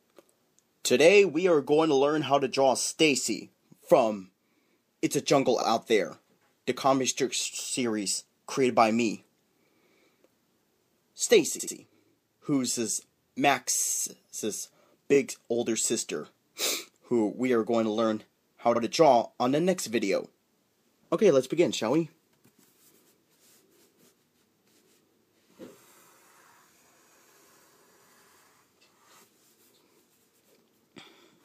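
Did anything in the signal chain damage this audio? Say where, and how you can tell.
Yes: repeated frames, at the codec or storage stage. Brief stutters at 5.61, 11.59, 15.14 and 18.75 s replay 26 to 78 ms chunks, the 11.59 one twice. The 26.1 ms steps suggest whole compressed frames duplicated.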